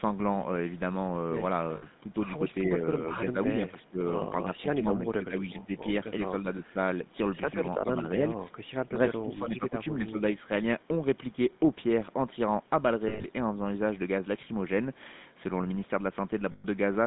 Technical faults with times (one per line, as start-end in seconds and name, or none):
0.00-17.07 GSM full-rate codec
1.76-1.84 lost GSM frames
3.27-4.01 speech suppressed in double talk
4.45-5.70 speech suppressed in double talk
6.43-6.77 speech suppressed in double talk
7.83-9.73 speech suppressed in double talk
10.06-10.49 speech suppressed in double talk
13.08-13.27 lost GSM frames
16.52-16.66 lost GSM frames